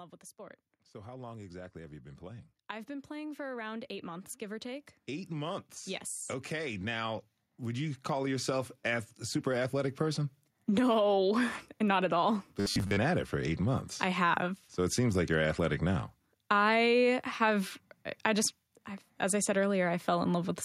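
A speech recording with two kinds of fault. The first is automatic gain rising, three times: from 0.38 to 2.54 s the level climbs by about 4 dB, from 3.08 to 5.73 s by about 5 dB, and from 6.48 to 11.22 s by about 9 dB. Each time the gain control treats the input as too quiet and turns it up gradually, so voice and background noise swell together. On a waveform the envelope widens steadily across each span, and on a spectrogram the whole band, noise floor included, brightens slowly. The second fault is robotic sound from repeated short buffers, from 12.60 to 12.97 s. Here the voice becomes a stiff, metallic buzz at 100 Hz that still loosely tracks the speech. The likely cause is audio arriving too late, with the software looping the last chunk of roughly 10 ms while most of the real signal is dropped. A spectrogram shows evenly spaced horizontal harmonics at multiples of 100 Hz, and the waveform shows one short shape repeating at a fixed period.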